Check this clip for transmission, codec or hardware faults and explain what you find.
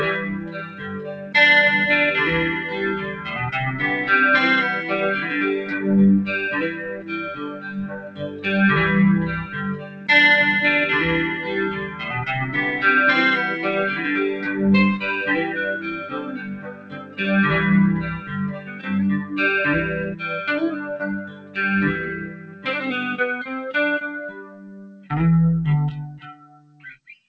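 The main fault is a speech-tuned noise suppressor left running across the whole clip, with six stretches where it clamps down hardest. The sound passes through a call path whose band stops at 8 kHz, consistent with G.722 at 64 kbps.

Noise suppressor applied to music or sounds: throughout, the suppressor treats sustained tones, ambience and decays as noise and pulls them down, so level swings by something like 15 dB. Onsets survive while held material sinks, giving a pumping, fluttering, thinned quality. On a waveform the envelope breathes unevenly. On a spectrogram sustained partials fade in and out in patches instead of holding steady, and the faint floor between events is carved away.

Sound cut by the noise suppressor: the deepest cuts fall at 0.19–1.34 s (about 11 dB), 2.97–3.31 s (about 8 dB), 5.63–10.08 s (about 11 dB), 11.71–12.07 s (about 8 dB), 15.79–22.66 s (about 12 dB) and 24.3–26.99 s (about 12 dB). 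Here the suppressor judges the material to be noise and ducks it further, so tails are truncated and steady passages sag audibly. The waveform shows sudden amplitude dips and clipped-off decays. The spectrogram shows darkened blocks and tails ending abruptly rather than tapering.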